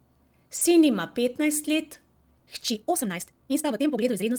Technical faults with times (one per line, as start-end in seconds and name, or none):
0.55-0.61 lost packet rebuilt from error correction
2.67-4.39 time-stretched section